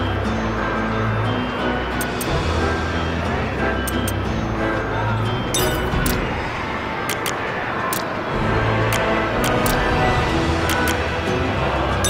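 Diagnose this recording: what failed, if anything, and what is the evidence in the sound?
Nothing stood out on listening that would point to a failure anywhere along the recording or playback chain.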